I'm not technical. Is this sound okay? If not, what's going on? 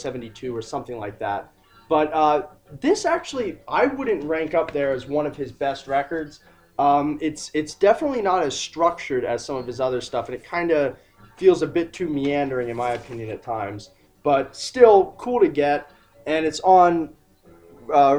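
Yes, no faults to hear.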